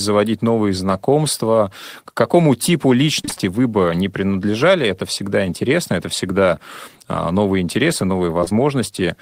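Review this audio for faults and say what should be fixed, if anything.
Repeated packet loss (robotic sound) runs from 3.21 to 3.41 s, between "какому типу" and "вы бы не принадлежали". Five gaps, the longest 29 ms, are patched by extending the preceding sound, so about half the stretch is synthetic. That gives a choppy texture rather than one isolated smear. Forward error correction or packet redundancy on the link would recover these losses.

Short concealed packet loss occurs at 8.41, 8.44 and 8.49 s, just after "всегда э новые интересы". Each hole is about 20 ms, bridged from the last sound and blended back, and the first stretches timing by roughly 10 ms. These are brief smears, not a sustained robotic run. A larger adaptive jitter buffer would let late packets arrive in time.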